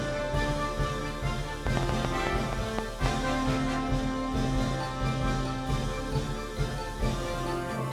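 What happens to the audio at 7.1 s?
Nothing goes wrong at 7.1 s; the audio plays through that moment intact, with no dropout, click or other fault.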